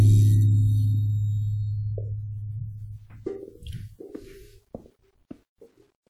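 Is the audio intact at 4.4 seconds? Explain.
No, at 4.4 seconds the music carries WMA compression damage, as it does through the whole clip. The transform coder likely smears its quantisation noise over tens of milliseconds, giving a ringing, washy sound with hiss that breathes along with the music, which fits a low bitrate around 48 kbps.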